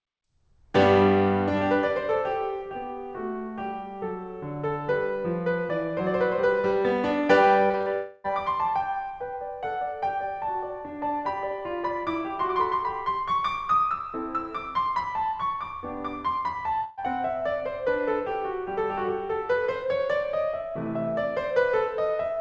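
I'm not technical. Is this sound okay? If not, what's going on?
No, the music has three network problems, all from the sound being sent over a call connection.

From 7.66 to 7.88 s there is repeated packet loss (robotic sound). Four times in quick succession, small pieces of the audio failed to arrive in time, the longest about 40 ms. Each time, the receiving end covered the hole by stretching out the last bit it had. Over this short stretch, a little over half of what you hear is that stand-in sound, so the music turns choppy, with pieces missing.

Right after, from 7.94 to 8.26 s, there is what is likely a long network dropout. About 300 ms of the music never arrived. The receiver filled the whole gap by carrying on the last sound, so instead of silence you hear a smeared, held-over sound that fades rather than the actual music. When it comes back, that third of a second of music is simply gone.

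At 16.84 to 16.99 s there is a burst of packet loss. About 140 ms of audio in a row went missing. The receiver again held onto the last sound and let it fade while waiting, so the music briefly turns into a held buzz or hiss. It then jumps ahead, skipping the part that was lost.

The call connection also removes everything above 8 kHz, which makes the music sound duller.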